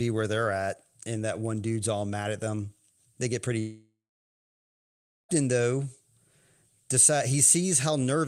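A long network dropout likely cut the stream after "get pretty" at 3.59 s: a fading buzz, then silence until 5.31 s, 1.7 s lost.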